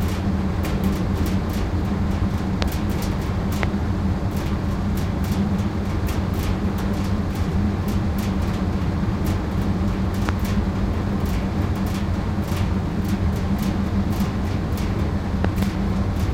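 A loud pop hits at 2.62 to 2.64 s, again at 3.63 to 3.65 s and at 10.29 to 10.31 s. Each is a sharp click, roughly 20 dB above the sound. A double pop follows at 15.45 to 15.65 s, slightly softer. The likely cause is a voltage spike from a switch or static. The sound continues underneath.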